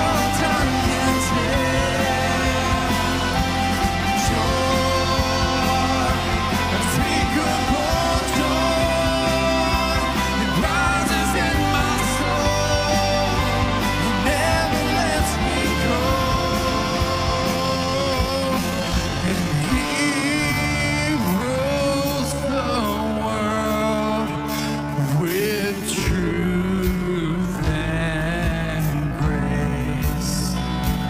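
A time-stretched section runs from 17.54 s to the end at 31.09 s, where the pace abruptly drops to about 0.59 times normal speed while pitch holds steady. This likely comes from software lengthening the audio by repeating short pieces, so the audio drags.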